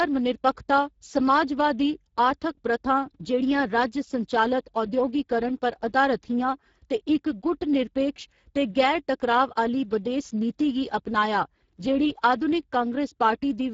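Across the whole clip the speech carries Speex codec damage that is plainly audible: a hoarse, noisy grain from too few bits for the excitation signal, consistent with a bitrate near 10 kbps. On a spectrogram, energy stops sharply at about 7.7 kHz, and the band above 4 kHz looks like smeared, noise-like fill rather than distinct harmonics. The waveform's envelopes stay intact, but fine detail within each syllable looks coarse and rough.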